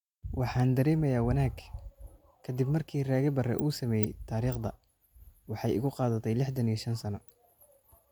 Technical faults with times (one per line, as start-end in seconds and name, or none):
none